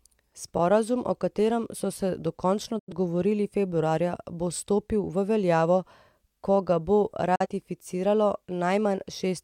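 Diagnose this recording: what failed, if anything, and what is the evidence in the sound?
The speech cuts out twice with a quick fade of about 8 ms into silence: from 2.79 to 2.92 s, right after "katerem so se dokončno", and from 7.35 to 7.46 s, after "ko ga bo". When it returns, the missing sound is skipped rather than delayed. This is a digital broadcast dropout at the reception and decoding stage. Corrupted frames failed their checks and the receiver muted them. The gaps point to about two lost frames (about 85 ms) and then one (about 43 ms).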